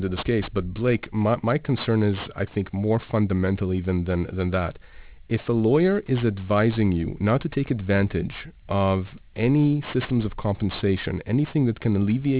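Aliasing runs through the whole speech clip. The audio sounds as though it was taken down to a much lower sample rate, which fits 8 kHz, without an anti-aliasing filter first. Everything above the 4 kHz folding point reflects back into the band as false, unrelated frequencies, sitting roughly 20 dB below the speech. Sibilants come out gritty and metallic, and the spectrum stays dense right up to the 4 kHz edge instead of rolling off.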